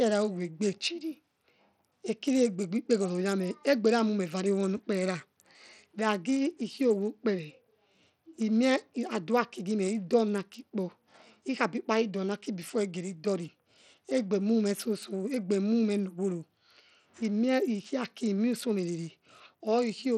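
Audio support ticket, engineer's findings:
Throughout. Speech treble thin and flickering, with gritty noise and aliasing riding on it. Likely Bluetooth SBC compression at a small bit pool, fitting roughly 80 kbps. Weak upper sub-bands starved of bits, remaining bands coarsely quantised. Plainly audible.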